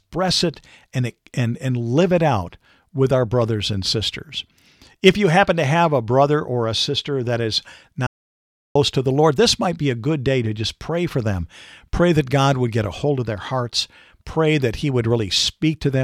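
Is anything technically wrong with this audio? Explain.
Yes. There is an audio dropout to silence from 8.07 to 8.75 s in this speech recording. The signal stops abruptly mid-flow and is replaced by about 0.69 s of silence, with no room tone or background noise underneath, before cutting straight back in. That points to the input being lost while the recorder kept writing silence, likely from a brief disconnection, link failure or accidental mute. Whatever was spoken in that gap is missing.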